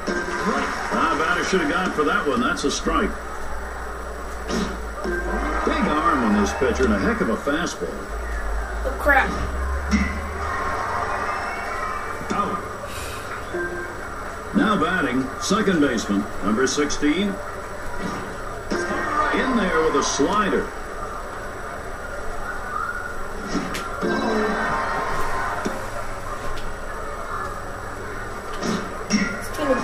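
No technical faults can be heard anywhere in the clip.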